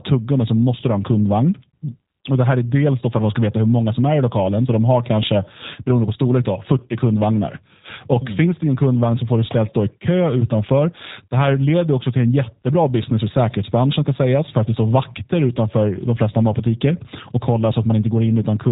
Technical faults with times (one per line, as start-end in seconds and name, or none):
0.00-18.71 G.729 codec